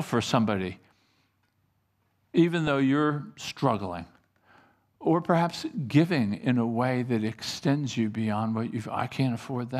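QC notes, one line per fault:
2.67 s, corrupt frame decoded. A brief chirp, squeak, blip or noise burst sits just before "though you're", peaking at about -15 dBFS. A single compressed frame arrived with damaged bits and was decoded anyway. Misread values pushed energy to wrong frequencies for that one frame's length.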